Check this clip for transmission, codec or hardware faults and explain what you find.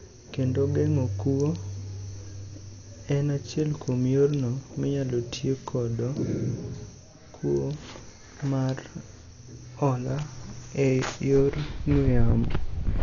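One codec fault runs through the whole speech clip. Dolby Digital compression, likely at a very low rate around 48 kbps, starves many frequency lines and fills them with dither noise: dull, rough, fluttering. The spectrogram shows a flat ceiling at 7 kHz and speckled noise around harmonics.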